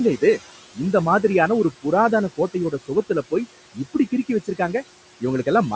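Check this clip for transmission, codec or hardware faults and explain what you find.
Two faults from noise suppression are present, one running through the whole speech clip and one brief loss of speech.

Noise suppressor artifacts, throughout: the suppressor pulls down the bands it judges to be steady noise, by about 18 dB, frame by frame. The room noise, which sits about 17 dB below the speech, dips between phrases and swells back under them.

Speech cut by the noise suppressor, 2.37 to 2.91 s, just after "இந்த மாதிரியான ஒரு புராதான": the suppressor mistook quiet speech for noise and lowered it by as much as about 16 dB. Roughly a tenth of a second of the sound within that span comes out swallowed and faint.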